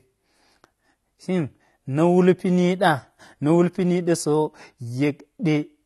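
Throughout the speech, nothing sounds above 12 kHz, and sibilants and held vowels carry a fizzy, warbling smear. That is likely AAC compression at a low bitrate, around 32 kbps. A plain low-pass filter would only dull the sound, without this shifting texture.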